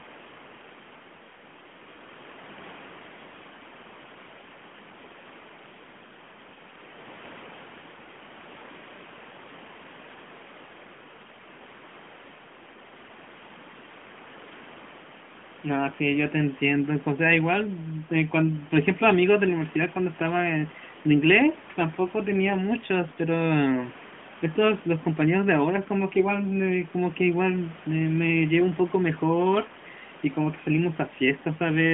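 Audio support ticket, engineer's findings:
No faults found in the speech. Room noise sits about 24 dB below the speech, and the AMR narrowband mobile codec limits the band to 150 Hz–3.4 kHz, with only light codec colouring.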